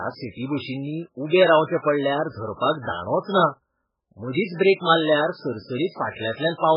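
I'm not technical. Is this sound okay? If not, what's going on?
No. Throughout the whole clip, the speech appears to have been squeezed very hard to save space, most likely by heavy MP3 compression. To fit into so little room, the encoder threw away all the upper sound above about 5.2 kHz and dropped the quieter details, which come and go from moment to moment. As a result, the speech sounds dull and muffled, with a watery, swirling quality, metallic chirps on s sounds, and smeared starts of syllables.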